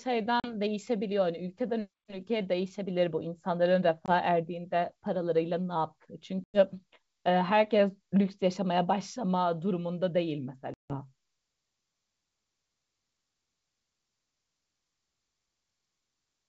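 Packet loss on an ADPCM call hits this speech at 0.40, 4.06, 6.44 and 10.74 s, leaving silent holes of 40, 20, 100 and 160 ms; the speech then returns slightly distorted while the decoder's predictor and step size resettle.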